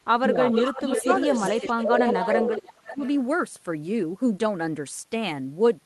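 From 0.17 to 0.39 s the speech dips sharply, by about 25 dB, likely speech suppressed in double talk, as the echo canceller turned down the near talker while both sides spoke. From 0.41 to 2.73 s a delayed copy of the speech trails 431 ms behind, only about 5 dB below it. This is likely an echo leak, where loudspeaker sound passed the canceller and was sent back. Within that stretch the speech thins again at 0.78 to 1.06 s, by about 5 dB, and at 1.25 to 2.52 s, by about 15 dB. From 2.77 to 3.03 s it nearly vanishes, dropping about 30 dB. A faint echo, about 25 dB down and 435 ms late, returns from 2.96 to 3.1 s.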